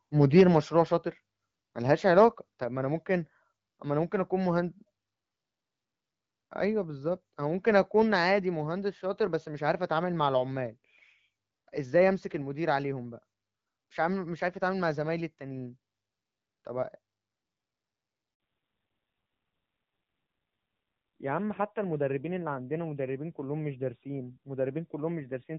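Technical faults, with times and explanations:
0.21 to 0.42 s, microphone overload: the loudest peaks in the speech reach the converter's ceiling and their tops are sheared flat, giving a harsh, crackling edge over this short stretch. The waveform overshoots the limit by about 4 dB, with around one sample in twenty flattened. This is likely an input volume set too high for the talker, so the peaks run out of headroom before any digital processing can rein them in.
0.41 s and 2.64 s, microphone volume stepped down: at 0.41 s the whole signal, speech and background together, drops abruptly by about 3 dB, right as the distorted burst ends. At 2.64 s a second drop of about 4 dB follows. Both are single clean steps with no gradual fade. The likely cause is the call software reacting to the overloaded input by lowering the device's capture volume in discrete jumps.
18.34 to 18.40 s, handover gap: the speech dies away almost instantly and a 60 ms hole of silence follows, after which the sound resumes on a different footing. 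Whatever was said in that window is gone. The call is moving between networks, and during the switch no speech frames reach the receiver, so the decoder has nothing to play until the new link starts delivering.
18.40 s to the end, fallback to narrowband: right after the gap the speech loses all content above 4 kHz. It turns duller and boxier, with a rougher grain than before. Up to this point the sound has the clearer, fuller top end of HD Voice at 12.65 kbit/s, with only light coding wear. The change points to the call renegotiating onto the older AMR narrowband codec at a low rate around 7.4 kbit/s.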